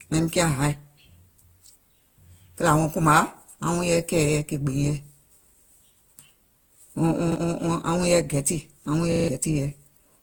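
Throughout, the speech sounds swirly, smeared and hollow, with blurred attacks. This is likely generation loss from about seven passes through Opus at 48 kbit/s.

At 7.32 s, a repeated buffer replays one 40 ms piece once, a short stutter. After "yɛi gɛtì aŋ wuŋ", at 9.12 s, it repeats four times, losing about 150 ms.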